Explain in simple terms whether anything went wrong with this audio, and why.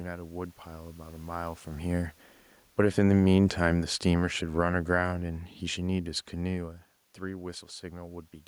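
The automatic gain control, which sets how loud the microphone is, went wrong: it decided the input was too loud, or its background noise too strong, and turned it down. This automatic gain falling runs from about 2.65 to 6.63 seconds. The voice and the room noise behind it sink slowly together over those four seconds, ending slightly quieter. The level changes around 1.5 and 6.5 seconds come from the talker moving relative to the microphone.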